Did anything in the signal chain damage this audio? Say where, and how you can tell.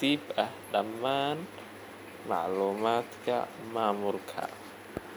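No, nothing in the signal chain damaged this audio.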